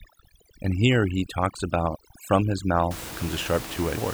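From 0.0 to 2.91 s, overdone noise removal: the noise reducer is set too aggressively, cutting individual frequency bands whenever they come close to its noise estimate, including quieter parts of the speech. The room noise, about 13 dB below the speech, drops and breaks up into twinkling specks.

At 3.96 s, compressed frames skipped: the decoder never plays a run of frames, which fits roughly seven frames of about 26 ms each. The speech jumps ahead by around a fifth of a second, and the overlapping frames leave a brief smeared blip at the join.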